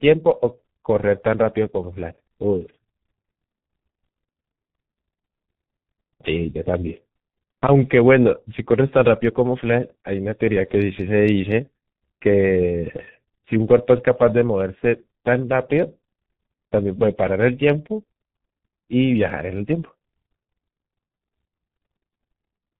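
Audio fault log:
throughout: G.723.1 codec, heavy damage. The speech has been squeezed into roughly 6.3 kbit/s, which fits G.723.1's 30 ms frames. Nothing above 4 kHz gets through, so the sound is muffled and dull, and the coder's model of the vocal tract updates only once per long frame. It can't follow quick changes, so consonants smear into their neighbours and voiced sounds take on a rough, hoarse quality.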